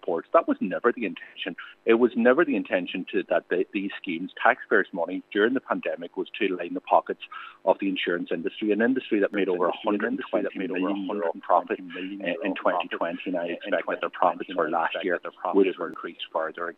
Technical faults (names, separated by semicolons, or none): doubled audio track